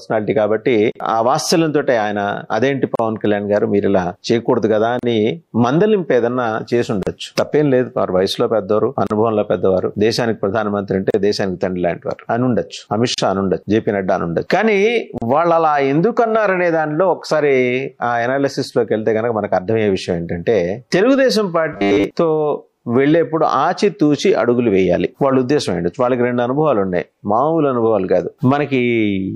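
Short silent holes of about 37 ms break the continuous sound at 0.92, 2.95, 4.99, 7.03, 9.07, 11.10, 13.14 and 15.18 s, roughly every 2 s, a gap at a join of encoded pieces where each segment's encoder delay and padding were left untrimmed. From 21.73 to 22.04 s the audio turns into a rigid, metallic 100 Hz buzz, robotic sound most likely from repeated short buffers, with about 10 ms chunks looped in place of most of the real signal.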